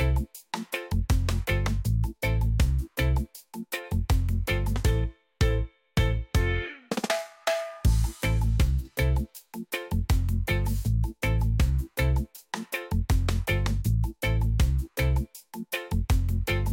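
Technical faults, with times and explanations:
No technical faults are audible anywhere in the recording, with nothing that interrupts or degrades it.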